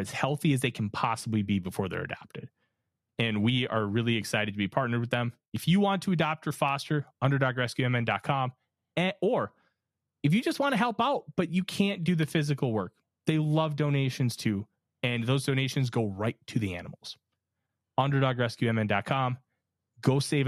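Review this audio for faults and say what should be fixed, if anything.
No faults turn up anywhere in this speech recording. Nothing needs to be fixed.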